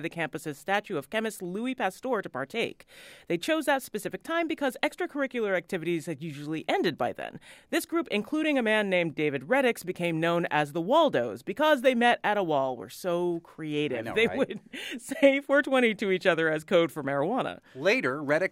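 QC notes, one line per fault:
No faults found on this speech clip; nothing to log.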